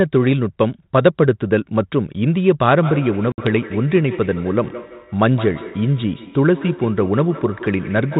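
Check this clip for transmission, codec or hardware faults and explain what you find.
Two faults are present in this speech, carried over G.726 ADPCM at 32 kbit/s with nothing above 4 kHz.

From 2.83 s to the end, feedback echo between two devices: a second device replays the far microphone, which recaptures it. Each phrase returns roughly every 150 ms, peaking about 14 dB below the speech.

At 3.32 s, packet loss on an ADPCM call: a few packets vanish, leaving a hard-edged 60 ms hole. The desynchronised decoder then recovers slightly distorted until 3.47 s.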